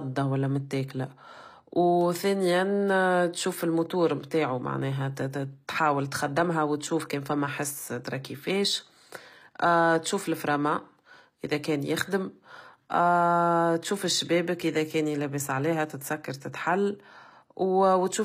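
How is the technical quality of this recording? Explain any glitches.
The recording has plainly audible codec damage from start to finish. HE-AAC compression, throughout: likely a low-bitrate encode, around 24 kbps, where upper frequencies are rebuilt by copying lower bands upward, leaving s sounds gritty, metallic and lispy.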